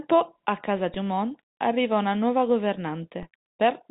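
A speech clip carrying a DC step at 0.94 s, just after "a casa", and again at 3.23 s. Each sudden shift in the zero line is heard as a low thump. On the waveform the trace jumps off centre and then drifts back, as a 20 Hz high-pass would cause. On a spectrogram each step shows as a brief vertical smear at the bottom of the telephone band, which itself stops near 3.8 kHz.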